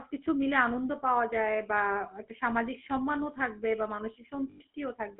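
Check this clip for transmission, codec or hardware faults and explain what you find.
Two faults are present: codec damage across the whole recording and a short dropout near the end.

GSM full-rate codec, throughout: the speech passes through a vocal-tract model excited by sparse, regularly spaced pulses. That coarse excitation, with a rate that fits 13 kbps, gives a plainly audible buzzy, gravelly roughness. The line band is confined to 250 Hz to 3.4 kHz.

Lost GSM frames, 4.5 to 4.62 s: about 100 ms of data went missing, which fits five 20 ms frames. The decoder repeated the last good frame's settings, so the sound hangs in a rough, metallic ring before recovering.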